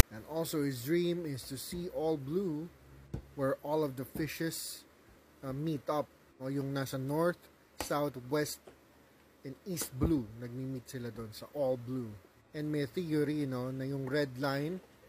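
From 0.00 to 0.03 s, file tags played as audio. Text metadata was decoded as samples, giving a harsh one-sided rasp with hard edges, then silence from padding.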